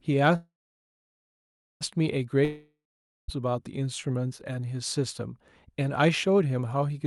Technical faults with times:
0.35-1.83 call audio freeze
2.45-3.30 long network dropout

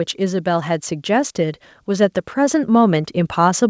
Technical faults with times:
0.16-3.69 automatic gain rising

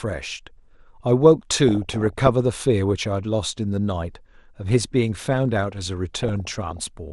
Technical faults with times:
0.00-7.12 MP2 compression
1.68-2.28 DAB burbling
6.14-6.81 DAB burbling

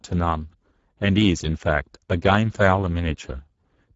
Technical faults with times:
0.00-3.96 Speex codec

